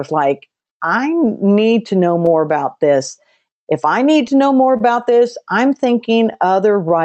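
A speech clip whose sender's clock runs roughly 2% slow against the receiver's, so clock drift between sender and receiver keeps the jitter buffer draining and timing slightly unsteady throughout. To compensate, the receiver makes repeated timing corrections from 0.49 to 4.01 s, stretching the audio to about 99% speed and adding around 50 ms, which is heard as a faintly dragging tempo with small hiccups. Scattered short gaps from about seven late or lost packets between 1.26 and 4.81 s are patched by extending the preceding sound, the longest around 30 ms, leaving brief smears or ticks. The call codec's top end stops near 8 kHz.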